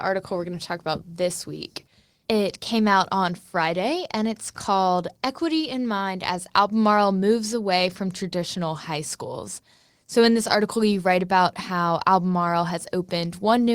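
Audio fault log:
No faults heard anywhere in this speech recording.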